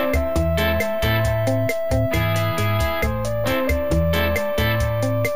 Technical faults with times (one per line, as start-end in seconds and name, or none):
0.00-5.36 imaging from sample-and-hold upsampling